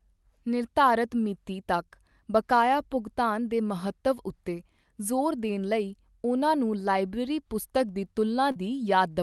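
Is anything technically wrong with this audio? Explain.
Yes, there's one short concealed packet loss near the end, at about 8.51 to 8.57 s. Roughly 40 ms of the call arrived too late, so the receiver stretched the preceding sound over the gap and blended back into the real audio. You hear it as a quick smear or wobble. The call path's top end stops around 12 kHz, which fits a call codec.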